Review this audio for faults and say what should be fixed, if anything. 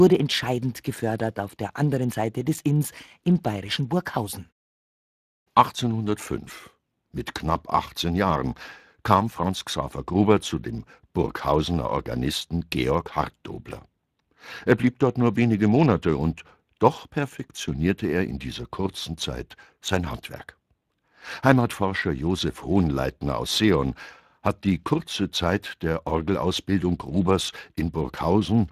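Speex codec damage runs through the whole speech clip, start to finish. The CELP coder models the excitation with too few bits, so the speech comes out hoarse and grainy, with a degree of damage that points to a mid-range Speex setting of roughly 22 kbps. On a spectrogram, harmonics look smeared and blotchy, and everything stops sharply at 15.4 kHz. The waveform looks normal in level but loses fine detail. To prevent this, record or transmit with a modern codec such as Opus at a higher bitrate, or keep an uncompressed original.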